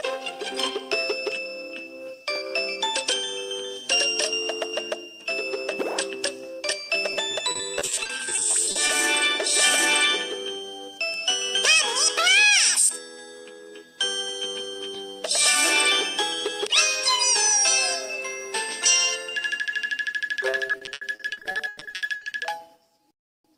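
Repeated packet loss gives the audio a choppy, robotic sound from 7.13 to 8.91 s and again from 20.51 to 22.33 s. Rapid dropouts are patched by repeating sound, with gaps up to 100 ms.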